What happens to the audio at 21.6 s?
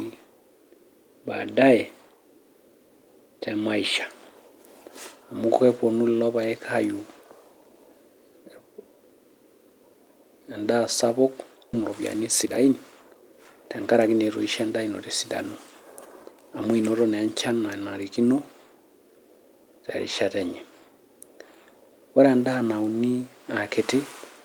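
Nothing goes wrong at 21.6 s; the speech carries on intact through that moment, with no dropout, click, glitch or change in level or tone.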